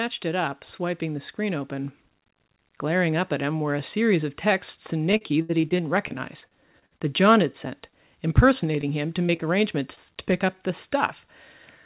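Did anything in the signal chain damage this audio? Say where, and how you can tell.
Yes. The call processing stage shows automatic gain rising from 0.22 to 2.0 s. The speech and the background noise swell together by about 5 dB over nearly two seconds, which is the giveaway. When a room simply gets louder, the noise floor doesn't climb in step with the talker. Here the AGC decided the input was too quiet and ramped its gain up slowly.

The network and jitter buffer stage produced repeated packet loss from 5.12 to 7.01 s, and that stretch sounds choppy and robotic. There are fifteen holes in under two seconds, the longest about 73 ms, and about a fifth of the span is concealed. The receiver keeps stretching the last bit of sound to cover each hole, then hits the next one before it has recovered. That stacking of concealment is what gives the robotic, chopped quality.

The network stage also caused short concealed packet losses later on, each a single 20 ms hole that the decoder papered over. 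There are two back to back at 7.87 and 7.90 s, right after "had sent", then one at 8.81 s, a pair at 9.27 and 9.37 s just after "him to", and a last one at 9.95 s. Each comes across as a tiny smear or wobble where the decoder extrapolated and blended back in. The call path itself sounds like G.711 mu-law at 64 kbps, with nothing above 4 kHz.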